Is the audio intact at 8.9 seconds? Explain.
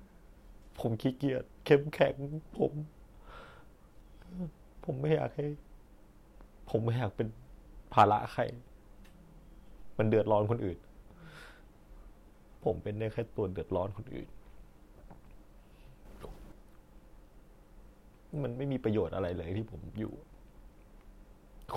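Yes, the speech at 8.9 seconds plays through intact, with no dropout, click, distortion or other fault at that point.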